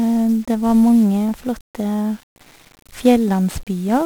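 From start to finish the speech has been squeezed through 1-bit DFPWM compression, consistent with a 48 kbps stream, and heavy broadband quantisation noise leaves it fuzzy, crackly and hiss-buried in the treble.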